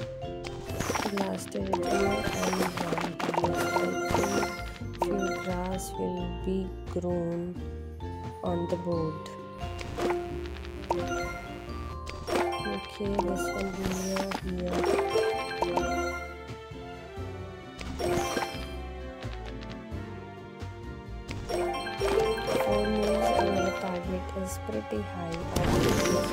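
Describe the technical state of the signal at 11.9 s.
Mains buzz from 9.58 to 11.94 s: switching spikes twice per 60 Hz cycle inject harmonics up to several kHz, a raspy buzz sitting roughly 15 dB below the signal.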